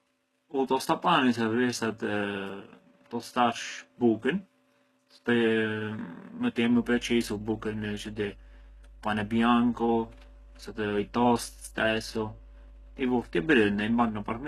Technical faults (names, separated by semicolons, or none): periodic clock jitter; HE-AAC compression; mains hum